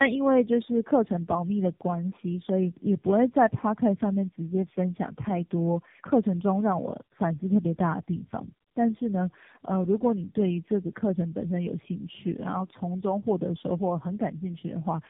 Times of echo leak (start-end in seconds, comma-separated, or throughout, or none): none